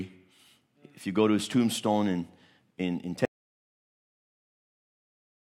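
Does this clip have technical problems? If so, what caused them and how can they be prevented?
Yes. The input was likely lost through a disconnected device, a failed link or a stray mute while the recorder kept writing silence, causing an audio dropout to silence. Right after "tombstone in in in", at 3.25 s, the speech cuts off and dead silence with no room tone runs to the end. Securing connections and monitoring input levels while recording prevents this.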